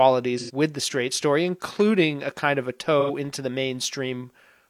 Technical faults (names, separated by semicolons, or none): AAC frame loss with concealment